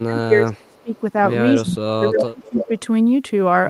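Low bit depth without dither runs through the whole speech clip: a grainy distortion that moves with the signal sits roughly 45 dB below it, and quiet stretches sound gritty rather than hissy. That fits the audio likely being rounded to about 9 bits with no dither, so the rounding error tracks the waveform instead of becoming a steady noise floor.

Speech suppressed in double talk comes first, from 0.02 to 0.95 s. The voice dips, by as much as around 30 dB at its deepest. This is likely an echo canceller that heard both ends talking at once, could not tell the near talker from loudspeaker echo, and turned everything down.

Echo leak overlaps it from 0.72 to 0.99 s. A faint copy of the voice trails 280 ms behind, far below the speech, likely because the far end's canceller let part of its loudspeaker pickup through and sent it back.

Speech suppressed in double talk returns from 1.55 to 2.71 s, again pulling the voice down by up to around 30 dB.

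Echo leak recurs from 2.44 to 2.79 s, now at a 311 ms delay and much louder, only about 10 dB under the speech.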